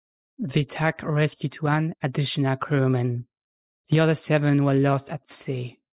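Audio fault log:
Nothing to log here; this speech clip came through without a single technical fault worth noting.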